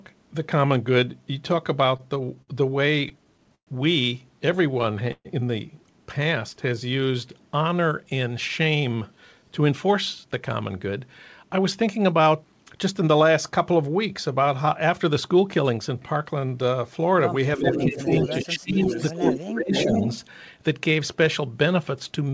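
From 1.86 to 2.50 s, 3.02 to 3.69 s and 4.71 to 5.27 s the sound hiccups in repeated stalls (stutter). The jitter buffer keeps running dry and the last sound is held on, for up to 60, 119 and 132 ms in the three bursts. Unlike packet loss, nothing is skipped: the audio resumes exactly where it stopped, just late.

Between 6.23 and 7.39 s a jitter buffer slow-down stretches the audio to 94 % speed, adding 78 ms by repeating pitch periods. The pitch stays put and the drag is smooth and continuous, not broken into the separate hiccups of the earlier stalls.

From 9.16 to 13.15 s the opposite happens. A jitter buffer speed-up plays the audio at 107 % speed, trimming about 0.3 s of pitch periods to shed surplus delay. It sounds hurried but keeps its pitch, which separates it from a sample-rate error, where pitch would rise too.

Between 17.58 and 18.09 s the talker dips by about 10 dB, then from 18.29 to 20.03 s by as much as about 25 dB, for roughly 1.4 s in all. 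This is speech suppressed in double talk, likely the echo canceller ducking everything while both ends talk.

Overlapping this stretch, at 17.70 to 18.45 s, 18.85 to 19.37 s and 19.72 to 20.20 s, a distinct delayed copy of the speech returns about 0.4 s late and about 5 dB below it. This is echo leak, likely a loudspeaker echo the canceller failed to remove. Its fixed, clearly separate delay sets it apart from room reverberation, which smears continuously rather than repeating.

Throughout, nothing is heard above 8 kHz, which fits a 64 kbps G.722 call path.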